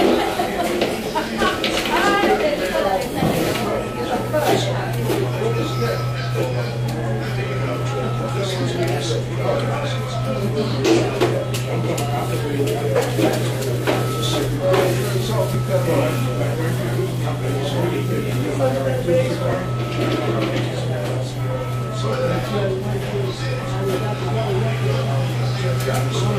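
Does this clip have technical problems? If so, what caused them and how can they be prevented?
Yes. Two overlaps between stream segments, at 11.56–11.60 s and 19.53–19.57 s, cause abrupt skips where about 40 ms of sound is missing. Adjacent 2 s segments carried overlapping timestamps, and the player discarded the overlap, so the waveform jumps. Generating segment timestamps from a single continuous sample clock prevents this.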